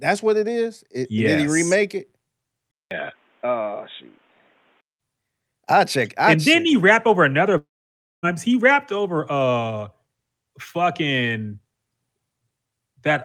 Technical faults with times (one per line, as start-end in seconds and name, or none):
2.71-5.01 input switched to a poorer device
7.57-8.25 long network dropout